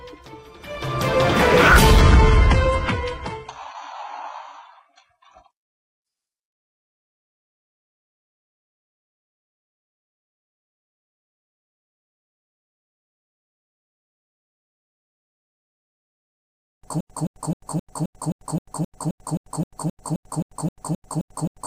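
Adaptive stream at a lower bitrate from 2.01 to 14.01 s: the stream switched abruptly, without a gap, to a much thinner version, losing everything above 11 kHz, which points to a drop to about 12 kbit/s. Broken-record loop from 17.01 s to the end: a 262.9 ms fragment repeats back to back 18 times, likely from a stalled player resending its last fragment.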